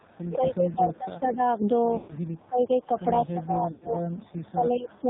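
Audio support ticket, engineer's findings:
Codec, whole clip: band-limited speech, nothing above 4 kHz, buzzy, synthetic timbre. Heavy AMR narrowband mobile codec damage. The degree of buzz points to a low AMR-NB mode, consistent with about 5.9 kbps. The vocal-tract model is fed too few pulses per subframe to carry natural detail.

0.00–0.04 s: onset dips by about 10 dB for roughly 40 ms, clipped start. Speech likely suppressed in double talk: echo canceller couldn't separate near talker from far-end echo and attenuated both.

0.67–0.98 s: faint delayed copy of the speech trailing by 174 ms, about 25 dB below the direct signal. Echo leak, likely from a far-end loudspeaker. Residual echo got past the canceller and was sent back.

4.17–4.31 s: same 174 ms echo, weaker, about 35 dB down, brief scrap. Echo leak again, same path, less residual getting through.

1.98–2.14 s: sound smears into a drawn-out warble, then fades toward silence over 120 ms; rough, weak recovery. 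Lost AMR speech frames, consistent with six consecutive frames. Decoder repeated the last good parameters with decaying gain.

3.72–3.89 s: same smear-and-fade over 100 ms, consistent with five frames. Lost AMR speech frames; concealment again decays before good frames resume.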